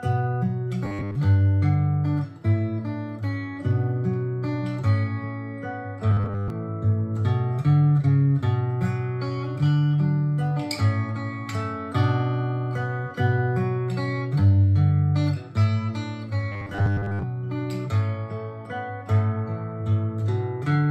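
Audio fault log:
0.85–1.15 s, 6.11–6.50 s and 16.52–17.24 s: robotic sound from repeated short buffers. Fresh audio is likely arriving too late, so the playback keeps looping a tiny stored slice, about 10 ms long, while most of the real material in these spans is skipped. That steady loop stamps a fixed 100 Hz buzz onto the sound, giving it a rigid, metallic, machine-like tone that only loosely tracks the original.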